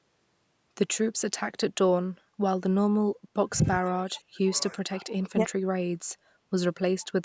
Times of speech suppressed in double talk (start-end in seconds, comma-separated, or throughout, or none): 3.39-3.54, 3.80-5.41